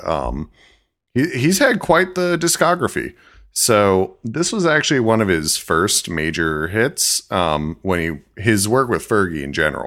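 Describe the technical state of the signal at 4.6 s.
At 4.6 s the speech is inside a channel delay (comb filtering) fault running from 4.07 to 5.07 s. One channel lags by a tiny amount, which fits a delay of roughly two samples. When the channels sum to mono, the upper treble cancels, with the first notch near 10 kHz, leaving the sound dull.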